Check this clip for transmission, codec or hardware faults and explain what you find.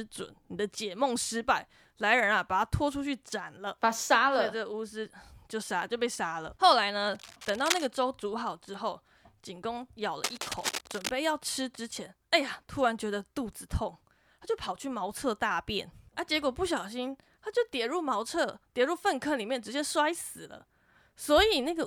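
Cable scratch noise affects the speech twice, from 7.15 to 7.89 s and from 10.24 to 11.09 s. A worn cable or connector being disturbed is the likely cause: its contact resistance jumps erratically, injecting ragged bursts of scratching and rustling only a few decibels below the speech.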